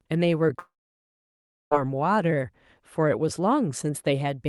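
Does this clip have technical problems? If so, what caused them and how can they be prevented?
Yes. From 0.59 to 1.74 s there is a long network dropout, likely from lost packets. The receiver stretches the last sound into a fading buzz, then about a second of near-silence follows, and the speech resumes with roughly 1.1 s missing. On a spectrogram this appears as a smeared, decaying band followed by an empty gap, and the waveform goes flat. A steadier connection, such as wired instead of Wi-Fi, with forward error correction enabled, would help prevent it.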